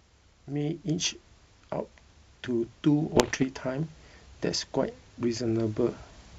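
Between 3.16 and 3.45 s, bit errors on the ADPCM link corrupt the G.722 stream at a rate of roughly one or two percent. Each flipped bit throws the decoder's step size and predictor off track, so the damage rings on for a few milliseconds instead of clearing at once. In the speech this is heard as a cluster of pops and gritty, rough bursts, with the level briefly jumping and dipping across that stretch of just under a third of a second.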